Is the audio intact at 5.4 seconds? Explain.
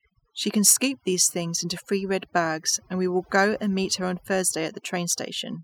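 No. At 5.4 s the speech is still affected by overdone noise removal, which runs through the whole clip. The noise reducer, set far too strong, pulls individual frequency bands down or out whenever they sit near its noise estimate, taking quiet parts of the voice along. The background drops and breaks up into twinkling specks. Unlike a plain low-pass filter, which dulls the top end evenly, the loss here flickers band by band.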